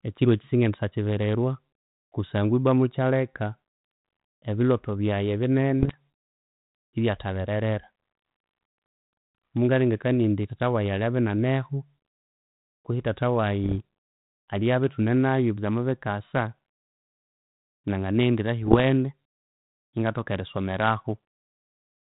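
Bit errors on an ADPCM link hit at 5.80 to 5.97 s, 13.64 to 13.75 s and 18.63 to 18.83 s: each brings pops and rough bursts with brief level jumps. A small fraction of flipped bits knocks the decoder's step size and predictor off track, so each error rings on briefly.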